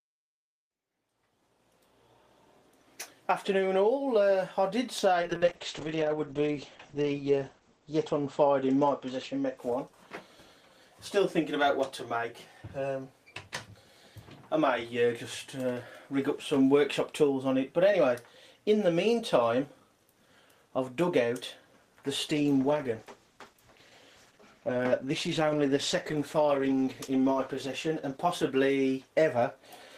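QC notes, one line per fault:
5.22–9.77 s: call bitrate drop. The sound turns rough and muffled. The top end closes from 20 kHz down to 8 kHz. The worst stretch lasts 1.98 s. This fits the encoder falling from about 32 kbps to around 9 kbps after the bandwidth estimate fell, so coding gets coarse and highs are cut.
22.3–29.77 s: call bitrate drop. Coarser, watery texture, worst for 5.15 s. It points to a fall from about 32 kbps to roughly 13 kbps.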